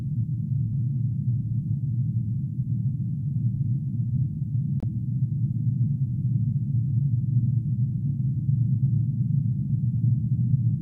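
An everyday sound recording with a digital broadcast dropout at 4.80 to 4.83 s: the receiver muted for about 24 ms, which fits a single corrupted frame, then resumed. The waveform shows a flat gap, and the spectrogram a thin full-height blank column.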